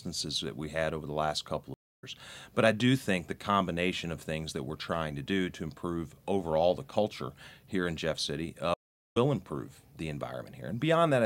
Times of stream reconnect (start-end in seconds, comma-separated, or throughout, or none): 1.74-2.04, 8.74-9.17